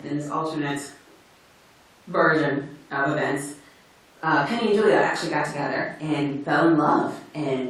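Nothing stood out on listening to the speech in this recording.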